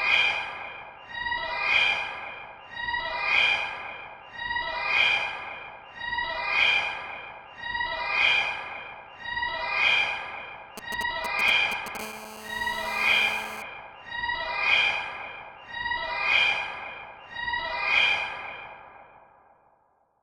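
From 10.78 to 11.97 s there are GSM signalling bursts. A 2G handset close to the recording chain sends brief clusters of radio pulses while it handshakes with the network, and some stage of the audio circuit rectifies that RF into the signal. The result is a galloping dit-dit-dit of short raspy buzzes at a repetition rate of about 217 Hz, loud enough to sit almost level with the sound itself. The broken, rhythmic grouping separates it from ordinary clicks or crackle.

At 11.99 s, almost seamlessly, this turns into GSM phone buzz, which lasts until 13.62 s. The phone is now in a call and transmits continuously in its 217 Hz burst pattern, so the rectified pulses form an unbroken, hard, harmonically dense buzz at about 14 dB below the wanted sound. It has nothing to do with the program material. Unlike mains hum, its fundamental is 217 Hz rather than 50 or 60 Hz, and its tone is a rasp, not a smooth drone.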